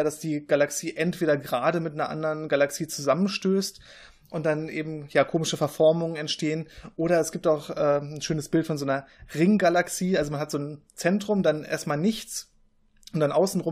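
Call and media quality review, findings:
No faults found in the signal path: the speech signal shows no audible degradation at any point.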